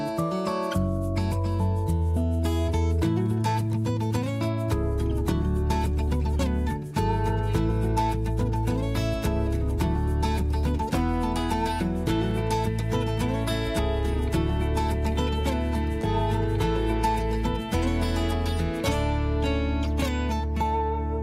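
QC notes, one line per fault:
16.01 to 16.05 s, short concealed packet loss: about 20 ms of audio never arrived at the decoder in time, so the receiver patched the gap by extending whatever came just before it, either carrying its pitch forward or filling with shaped noise, then crossfading back into the real signal. That patched stretch doesn't quite match what belonged there, which is why you hear a quick smear or wobble right at that spot.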